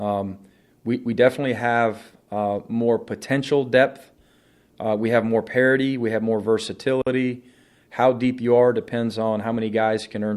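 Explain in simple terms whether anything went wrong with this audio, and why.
The audio was made from separately encoded pieces joined without trimming the silent padding each encoder run adds. That leaves a gap at a join of encoded pieces: from 7.02 to 7.07 s the sound drops out for 48 ms, then carries on where it stopped.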